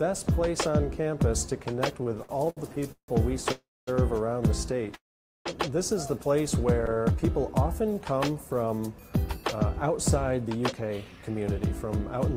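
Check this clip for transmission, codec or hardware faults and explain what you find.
The clip has four kinds of transmission fault, all tied to late packets and the receiver's jitter buffer.

Repeated stalls (stutter) occur from 2.03 to 3.10 s and again from 6.81 to 7.11 s. In the first stretch, packets fell behind playback thirteen times. Each time the buffer emptied, and the receiver stretched the last sound to cover the hole. About 407 ms was filled this way, 38% of the span. The longest hold was 164 ms. The audio drags and stammers. The second stretch is milder: seven tiny holds totalling 69 ms, none over 18 ms.

Call audio freezes occur from 3.52 to 3.89 s and from 4.94 to 5.47 s. The sound halts, and the last bit of audio carries on as a decaying buzz, then drops to silence. The first freeze lasts 352 ms, with 240 ms of it silent. The second lasts 512 ms, with 460 ms silent. The likely cause is packets held up in the network long enough to drain the buffer. 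Afterwards the audio resumes where it stopped. Nothing is lost, but each gap adds its full length to the delay.

A jitter buffer slow-down runs from 7.01 to 8.06 s. It overlaps the end of the second stutter. The buffer was short of reserve, so the receiver repeated single pitch periods and slivers of pauses over and over. About 75 ms was added in total. Playback runs at roughly 94% speed with the pitch unchanged. Sounds feel drawn out, with a faint warble in places.

A jitter buffer speed-up runs from 9.90 to 12.35 s. Now the buffer held more audio than its target, likely after delayed packets arrived together. The receiver trimmed short pieces of one or a few pitch periods, many times in a row. Roughly a fifth of a second was removed. Playback runs at about 107% speed with the pitch unchanged. The audio sounds hurried.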